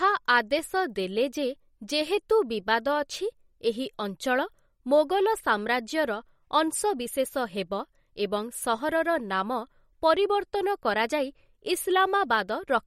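From start to finish the speech carries plainly audible damage, likely from MP3 compression. Nothing is present above 16 kHz, so the top end stops abruptly. The damage fits a low bitrate, around 48 kbps. With so few bits, the encoder drops quiet frequency components, and they flicker in and out between frames. That gives the speech a watery, swirling texture. S sounds turn metallic and chirpy. Sharp onsets blur.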